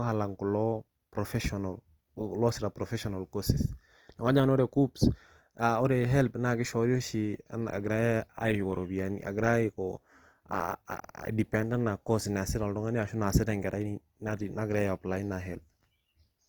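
Opus compression is present throughout. The speech is grainy and rough, with tones turning noisy while the top end stays open to 20.2 kHz. This likely comes from Opus in CELT mode at around 24 kbps, filling starved bands with folded or noise-like content.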